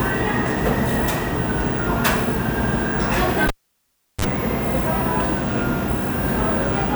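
A sharp pop at 3.48 s cuts this recording of everyday sounds to near silence for about 0.72 s, then a brief 50 Hz mains buzz of roughly 36 ms and a second pop bring the sound back at 4.25 s. This is a cable pulled and plugged in while live, the buzz coming as the plug's tip touched first.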